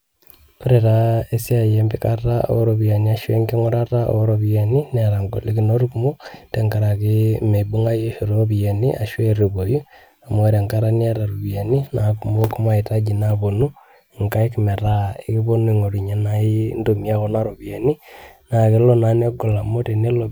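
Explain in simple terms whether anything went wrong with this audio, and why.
Nothing went wrong here; the recording has no audible faults.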